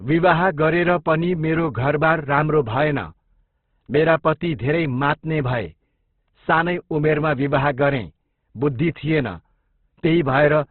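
Opus compression is the likely cause of the damage heard throughout the speech. Nothing survives above 4.2 kHz, so the sound is narrowband and dull. Within that range the encoder holds each band's overall energy but has too few bits for detail, filling bands with folded or noise-like content. Tones turn grainy, rough and hissy rather than clean. The heavy degradation fits music-mode coding at a very low bitrate, around 12 kbps.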